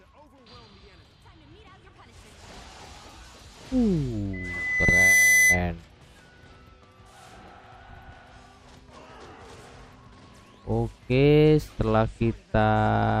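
A microphone was picking up the loudspeaker it fed, and the loop's gain rose above one at 2 kHz, causing loudspeaker feedback squeal from 4.33 to 5.64 s. The tone swells over roughly three quarters of a second into a piercing whistle, ending about 5 dB louder than the surrounding sound.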